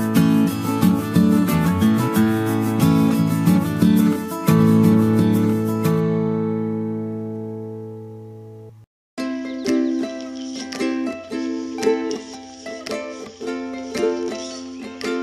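From 4.6 to 8.7 s a doubled audio track appears: a second copy about 1.5 s behind, around 5 dB quieter, likely from a slower capture path.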